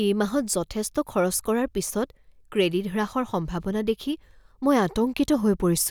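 A short recording of speech, with no technical faults to report. Nothing heard in it calls for a time or a cause.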